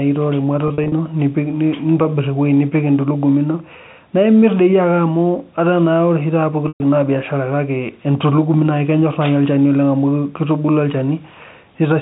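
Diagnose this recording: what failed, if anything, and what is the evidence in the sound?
Network packet loss with pitch repetition, heard at 0.68 to 0.92 s as short, scattered buzzy holds, and at 6.68 to 6.80 s as a continuous 120 ms gap. The concealment repeats the last pitch period and fades it, unlike a hard dropout or a repeated chunk.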